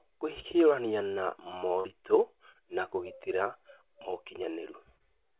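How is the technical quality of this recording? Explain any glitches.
The recording has three brief glitches. It also comes through a narrowband call path, with nothing above 4 kHz, which fits G.711 mu-law telephone coding.

At 1.80 to 1.87 s and 4.96 to 5.03 s, short concealed packet loss leaves a quick smear or wobble. About 40 ms of audio never arrived, and the receiver filled the gap by extending the preceding sound.

At 2.52 to 2.58 s, a sound is held slightly too long. This is a short stall from a late packet: the jitter buffer ran dry, and the receiver stretched the audio by about 27 ms until the packet arrived. Nothing was lost.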